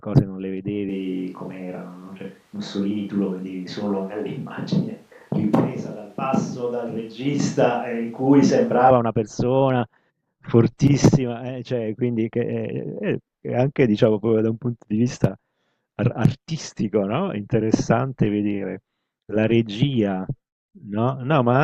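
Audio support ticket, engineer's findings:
Speech turns roomy and hollow, thinner bass, from 0.89 s to 8.91 s; abrupt change in and out. Likely cause: switch to a distant microphone, close mic dropped. Level roughly unchanged; room noise around 35 dB below speech. Spectrogram: weaker low band, smeared reverb tails, hard edges at both boundaries.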